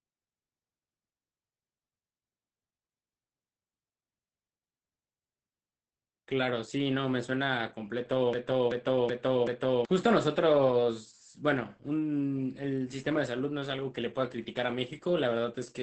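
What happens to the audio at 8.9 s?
Between 8.33 and 9.85 s, the playback or stream likely stalled and resent its last buffered fragment, a broken-record loop: a 0.38 s piece repeats four times back to back, and the audio meant for that stretch is lost. Throughout, heavy Opus voice compression, consistent with a SILK coder running near 10 kbps, removes everything above 8.4 kHz, leaving the speech muffled, hoarse and slightly robotic.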